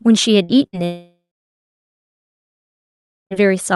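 Bursts of packet loss strike at 0.43 to 0.52 s and again at 0.67 to 0.76 s. In each, a short run of packets never arrived in time, and the receiver stretched the last sound over about 60 ms. A brief fading buzz or hiss replaces audio that is simply gone.

At 0.85 s the stream stops entirely, likely a long network dropout. A fading fill lingers for a few tenths of a second, then about 2.1 s of silence follows before the speech resumes at 3.34 s, with roughly 2.5 s lost.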